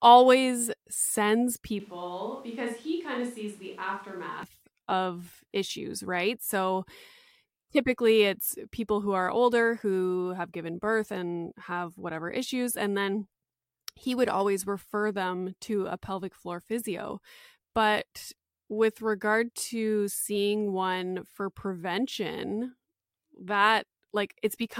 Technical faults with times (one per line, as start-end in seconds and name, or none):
1.80-4.43 switch to a distant microphone